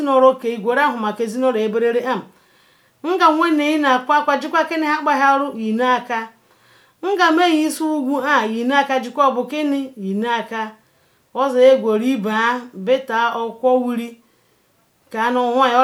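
Nothing in this speech recording stands out as a technical fault at any point, so there's nothing to flag here.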